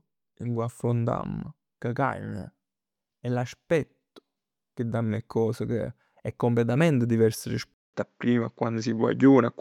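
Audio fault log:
7.74–9.61 s, input switched to a poorer device: right after "che è completamente diverso" there's a 200 ms gap, then the speech comes back duller and slightly shifted in level, with nothing above 7.6 kHz and a faint new hiss underneath. That's likely a change to a narrower-band microphone.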